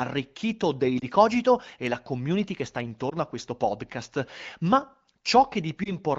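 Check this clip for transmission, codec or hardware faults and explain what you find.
There are three short dropouts from lost AMR speech frames, heard over light AMR-WB (HD Voice) coding whose clarity fits a rate around 15.85 kbit/s.

They fall at 0.99–1.05 s, 3.09–3.13 s (between "la community che sta" and "a questo podcast"), and 5.84–5.95 s. Each is a single 20 ms frame that failed its checksum. The decoder patched it from the previous frame's pitch and vocal tract settings with lowered gain, so you hear a brief dip or warble before the speech picks up again.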